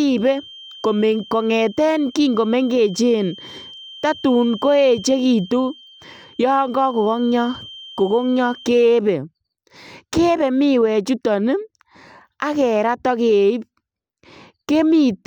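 From the start of the speech to 8.84 s, a feedback whistle sits underneath it: a thin, steady tone at 3.1 kHz, roughly 25 dB below the voice level, slowly swelling and fading in level. The likely cause is a loudspeaker-to-microphone loop running just at the edge of instability, so one frequency keeps ringing at a sustained level without building into runaway howl. After 8.84 s the whistle is no longer present.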